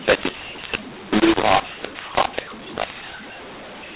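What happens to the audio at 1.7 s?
At 1.7 s you're hearing the same mu-law and A-law mix-up that runs through the whole clip. The speech was coded as mu-law but decoded as A-law, so levels get scrambled. It sounds harsh and gritty, with quiet stretches lifted into a noisy hiss.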